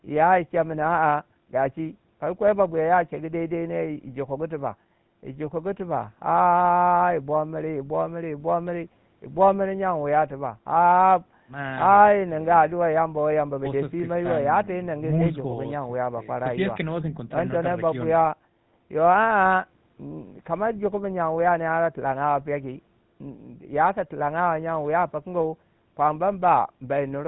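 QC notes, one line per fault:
Throughout, GSM full-rate codec: the speech has a buzzy, gravelly roughness, consistent with a 13 kbps GSM full-rate stream, where a pulse-train excitation drives a vocal-tract model. On a spectrogram, energy stops sharply at 4 kHz and harmonics look smeared and grainy.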